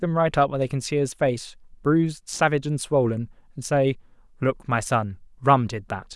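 A speech clip with a short burst of loose connector crackle from 2.32 to 2.40 s, a worn or dirty contact briefly making and breaking, chopping the signal into scratchy pops.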